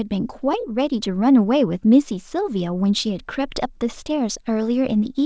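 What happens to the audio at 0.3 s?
Nothing goes wrong at 0.3 s: the speech passes intact through the call path, which tops out at 8 kHz in the way the G.722 codec does at 64 kbps.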